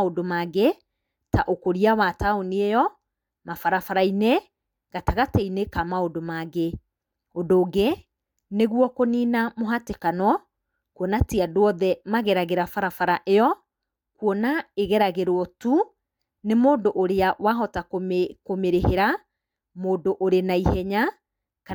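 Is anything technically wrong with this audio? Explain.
No, nothing technically wrong can be heard in this speech recording. There is no fault to point to anywhere in the clip.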